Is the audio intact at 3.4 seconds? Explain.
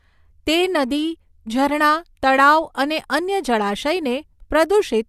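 Yes, the audio is intact at 3.4 seconds, with no dropout, click, distortion or other fault at that moment.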